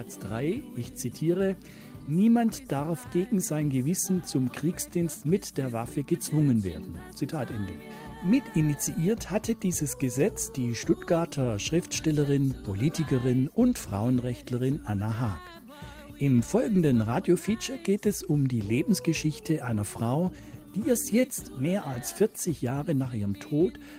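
Clock drift between sender and receiver runs through the whole clip. The sending device's clock is slow by roughly 1.5 percent, so the receiver's jitter buffer keeps draining and must be topped up by repeating small fragments of audio.

Repeated timing corrections are heard from 0.45 s to 23.59 s. The receiver inserts short repeated pieces at uneven intervals, adding about 0.4 s overall and running at 98 percent speed. The result is a slightly dragging tempo marked by faint, irregular hiccups.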